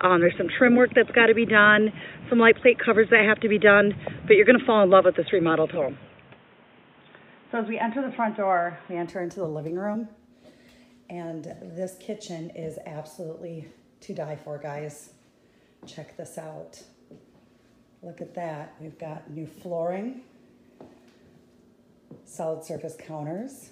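Input switched to a poorer device, from the start to 9.08 s: during this stretch nothing reaches above 3.8 kHz, so the sound is dull and boxy, with a different background noise sitting roughly 35 dB below the signal. At 9.08 s the full band returns without any gap or jump in level. The likely cause is the recording input running on a narrower-band microphone or headset profile before changing to a better device.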